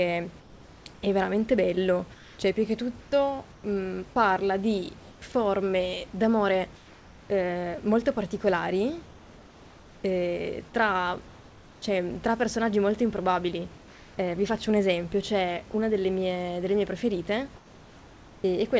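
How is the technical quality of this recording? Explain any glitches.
The recording has two kinds of glitch, both in the pauses of the speech: the room background is repeatedly replaced by a smoother synthetic hiss, and a tiny scrap of sound is cut once. Nothing is heard above 8 kHz, which fits the G.722 call codec at about 64 kbps.

Comfort noise in place of the background, at 0.4–3.64 s, 6.76–7.3 s, 9.06–11.82 s, 13.78–14.18 s and 17.56–18.44 s: in these gaps the natural room noise, sitting about 25 dB below the loud speech, gives way to an even, textureless hiss, in several spans about 3 dB quieter. Stretches of up to about 1.5 s are filled this way. The likely cause is discontinuous transmission. The sender stops sending when it detects no speech, and the receiver generates shaped noise until speech resumes.

Sound dropped by the voice detector, at 15.72 s: a 20 ms blip where roughly 10 ms of real sound is lost and steady noise briefly takes its place, heard as a tiny clipped edge. 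The sender's voice detector likely judged this faint moment to be background and paused transmission, so the receiver filled it with comfort noise until the detector triggered again.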